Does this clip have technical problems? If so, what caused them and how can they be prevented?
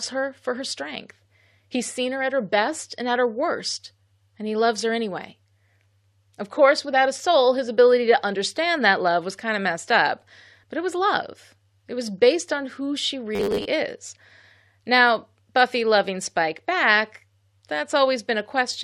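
Yes. From 13.35 to 13.65 s the speech turns into a rigid, metallic buzz: robotic sound from repeated short buffers. The buzz sits at about 100 Hz, which points to a slice of roughly 10 ms being played over and over. About half of that stretch is repeated material. The real audio in those gaps is skipped. The likely cause is new audio arriving too seldom, so playback loops the last buffer instead. A larger jitter buffer and a steadier network or processing load would prevent it.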